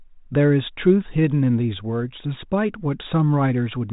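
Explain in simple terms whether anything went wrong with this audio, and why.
Nothing went wrong with this recording. It carries the narrow, slightly muffled tone of a cordless-phone line, with nothing above about 3.8 kHz and only light coding roughness, which is how that kind of phone link normally sounds.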